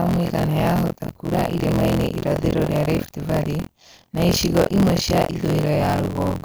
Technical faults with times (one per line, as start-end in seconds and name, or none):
0.00-6.45 buffer tearing